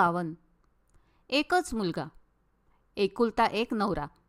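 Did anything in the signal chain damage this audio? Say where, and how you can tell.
No, nothing in the chain audibly damaged this speech.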